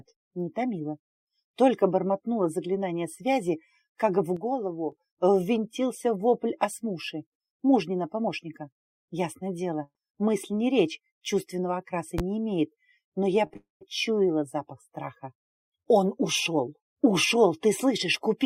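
At 4.37 s the level steps down by about 6 dB in a single instant and stays there until 4.92 s. The sound and its background noise drop together, which marks this as a sudden gain jump rather than a fade, likely from a gain setting applied without a ramp.

From 9.83 to 9.97 s a burst of packet loss removes about 120 ms. The receiver extends the last sound for roughly 114 ms as it dies away, including about 40 ms of near-silence, then resumes further on. It is shorter and less hollow than a full dropout.

Between 12.18 and 12.22 s a single loud pop sits roughly 15 dB above the surrounding sound, which carries on underneath. Nothing is missing, unlike the packet-loss events. The cause is likely a voltage step from a switch, plug or static discharge.

At 13.47 s and again from 13.53 to 13.57 s, short concealed packet loss leaves two brief smears. Each replaces about 20 ms with a continuation of the preceding sound, heard as a wobble rather than a gap, before blending back into the real audio.

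Immediately after, from 13.57 to 13.83 s, a long network dropout takes out about 240 ms, likely from a break in the incoming stream. A fading tail is followed by about 150 ms of silence before the sound returns further on, which is longer and emptier than the earlier burst.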